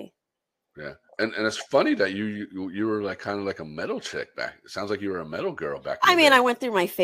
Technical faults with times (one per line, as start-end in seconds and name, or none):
0.00-7.03 sample clock jitter